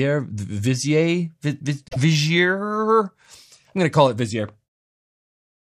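At about 1.87 s the compressed stream carries damaged data: a run of bytes that no longer decodes as valid audio, whether lost, zeroed or overwritten. The decoder misreads those frames, loses its place in the stream and has to hunt for the next good frame header before normal output resumes at about 1.96 s. For that roughly 90 ms gap the sound is replaced by a chirp, squawk, click or short hole.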